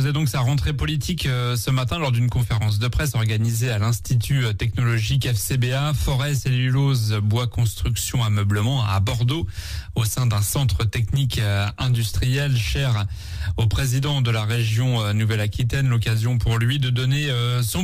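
Imaging from linear upsampling runs through the whole clip. The sound points to a rate raised from about 22 kHz to 44.1 kHz by joining samples with straight lines, a weak filter that dulls the top of the original band and leaves a mirrored copy between 11.03 and 22.05 kHz, roughly 25 dB down, heard as a faint metallic shimmer on bright sounds. Unlike aliasing, the stray content mirrors the real spectrum above the old band edge instead of folding down into it.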